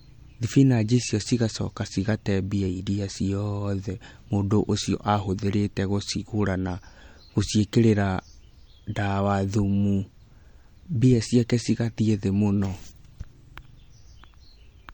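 MP3 compression runs throughout the speech, with the plainly audible damage likely coming from an encoder starved of bits, which points to a rate around 48 kbps. Weak frequency lines flicker between frames, giving a watery swirl and smeared consonant onsets, with nothing above 19.4 kHz.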